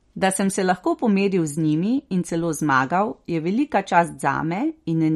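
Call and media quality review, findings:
Whole clip, speech: watery, swirly sibilants, hard treble ceiling at 14.7 kHz, flickering spectral holes on spectrogram. Likely MP3 compression, bit-starved encoder zeroing weak lines; damage fits roughly 48 kbps.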